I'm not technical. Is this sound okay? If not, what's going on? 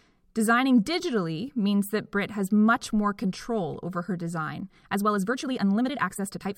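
No. From about 4.58 seconds, right after "more control over her", the speech suddenly rushes ahead until the clip ends at 6.58 seconds, yet the pitch doesn't rise the way a sped-up recording normally would. This is a time-stretched section: the last stretch was likely squeezed to about 1.5 times its normal speed by software that kept the pitch steady by cutting out tiny slices of sound.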